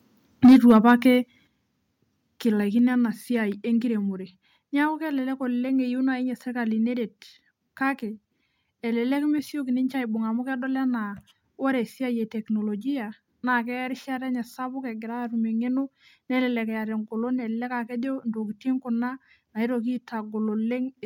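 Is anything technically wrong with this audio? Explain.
Yes. From 0.44 to 0.72 s there is microphone overload. Peaks run about 6 dB past the converter's limit, and roughly a fifth of that stretch is flattened. The likely cause is an input volume set too high. Unlike a distant or noisy microphone, this adds a harsh, crackling edge only on the loudest peaks.

Microphone volume stepped down occurs at 0.46 s (about 3 dB), 1.47 s (about 6 dB), 2.79 s (about 2 dB) and 3.81 s (about 2 dB). These are likely the call software lowering the device's input gain in response to a too-loud or clipping input. Each is an instant, lasting drop in level, with no fade like a person moving away.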